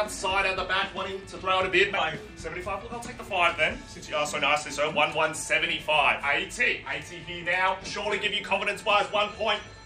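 No technical faults are audible.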